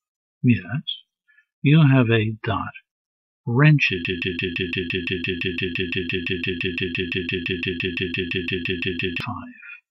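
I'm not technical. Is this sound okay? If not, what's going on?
No. From about 4.05 s to 9.2 s the sound gets stuck in a broken-record loop: a tiny snippet, about 0.17 s long, plays over and over, roughly 30 times back to back, so you hear a stuttering, machine-gun repeat instead of the sound moving on. Whatever should have played in those five seconds is simply gone. The likely cause is that the player or stream stalled and kept resending the last bit it had.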